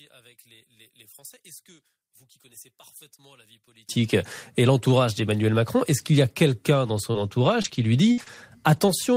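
From 0.0 to 3.89 s the speech drops by about 29 dB, leaving a faint residue rather than true silence. The likely cause is one channel inverted: with one stereo side's polarity reversed, the centred speech cancels when the channels are summed to mono. Unlike a plain gain drop or a dropout, nearly all of the sound vanishes together, background included, while a ghostly difference signal lingers.

Just after "qu'il y a quelqu'un", between 6.86 and 8.90 s, come scattered short gaps. About five small packet losses, totalling 140 ms of missing audio, are patched by extending the preceding sound, with 220 ms rebuilt overall. None lasts more than about 50 ms, and roughly 7% of that stretch is concealed. They register as brief smears and hiccups instead of clean silences, which sets them apart from hard dropouts or clicks.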